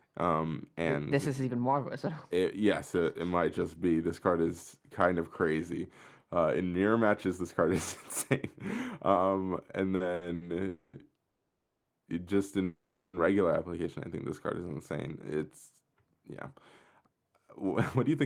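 Around the 10-second mark there's a cluster of short stalls from late packets, at 9.95 to 10.02 s, 10.14 to 10.23 s and 10.35 to 10.43 s. Each time a packet wasn't there when it was due, the jitter buffer ran dry, and the receiver stretched the last bit of sound for 50, 70 and 60 ms until the packet turned up. Nothing gets lost. You just hear the sound hang a touch too long, with a faint buzzy smear.

Right after that come three call audio freezes, at 10.68 to 10.95 s, 11.29 to 11.86 s and 12.64 to 13.15 s, likely caused by packets getting held up in transit and emptying the buffer. The first is a 250 ms fill that carries the last sound on as a decaying buzz without going quiet. The second runs 550 ms and drops to silence for about 520 ms of it. The third lasts 490 ms, about 270 ms of it silent. Afterwards the audio picks up where it stopped, so it's a gap inserted rather than anything cut out.

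Near the end, from 17.02 to 18.09 s, there's a jitter buffer speed-up. The buffer had built up more delay than it wants, so the receiver trimmed lots of tiny pitch-period chunks, roughly 70 ms in total. Playback runs at about 106% speed with the pitch unchanged, and the speech sounds slightly rushed.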